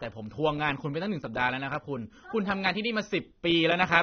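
Speech with AAC compression damage throughout: nothing reaches above 6.3 kHz, and the top is dull, with plainly audible smeared, warbling artefacts. The likely cause is AAC-LC encoding at a bitrate around 24 kbps, where the encoder discards the upper band and coarsely quantises the rest.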